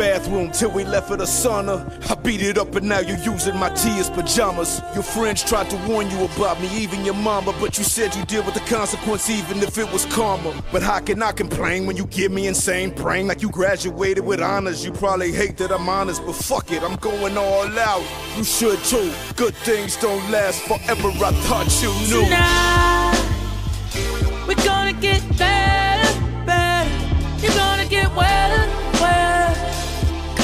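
Nothing goes wrong anywhere in this one; there's no fault to point to at any moment in the recording.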